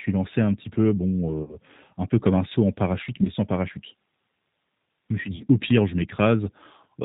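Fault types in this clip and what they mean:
G.729 codec: The whole clip carries the plainly audible sound of a low-rate speech codec. It models the voice as a vocal tract filter plus a pitch predictor, with a few pulses per short frame. The result is intelligible but rough and slightly synthetic. Nothing above 4 kHz survives, so the speech is narrowband and dull. That character fits G.729A at around 8 kbit/s.
VoIP packet loss concealed by the speech codec: The speech is interrupted three times, at 1.43 s, 3.23 s and 5.36 s. Audio lasting about 60 ms, 20 ms and 40 ms is missing. The decoder fills each gap by repeating its last pitch and filter at falling gain. Each gap therefore sounds like a brief buzzy or noisy, fading smear. The voice stays weak or distorted after each gap, to about 1.56 s, 3.29 s and 5.45 s, while the decoder recovers.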